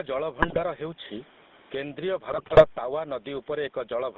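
A speech recording carried over a GSM call shows three faults. The likely cause of the first is an input gain set far too high, with a fast limiter or compressor clamping down on every loud syllable. That gain pumping swings the level by around 15 dB throughout, against faint room noise about 40 dB under the speech. Loud and quiet passages end up squeezed together into a flat, crushed delivery. The second fault runs through the whole clip: the GSM full-rate codec, at a rate that fits 13 kbps full-rate coding. It rebuilds the voice from a vocal-tract filter excited by a sparse, regularly spaced pulse train, and the line passes only about 200 Hz to 3.7 kHz. The result is a plainly audible buzzy, gravelly grain laid over a thin, band-limited voice. The third fault is GSM bit errors on a weak radio link, from 0.42 to 0.61 s and again from 2.30 to 2.67 s. Corrupted bits reached the decoder and scrambled its filter, pitch and gain parameters frame by frame. 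In both stretches the voice breaks up into squawks, pops and gargling bursts, and the second, longer stretch lasts over a third of a second.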